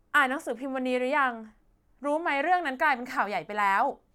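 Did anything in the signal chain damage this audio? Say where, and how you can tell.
No, nothing in the signal chain damaged this audio.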